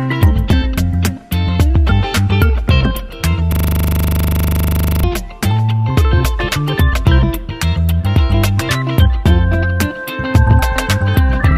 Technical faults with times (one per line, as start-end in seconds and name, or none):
3.52-5.04 system hang loop